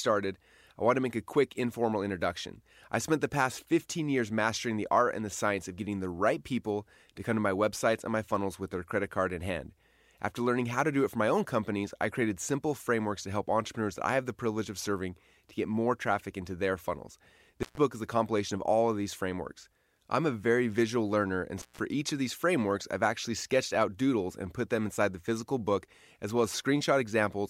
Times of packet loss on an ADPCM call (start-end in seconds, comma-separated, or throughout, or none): none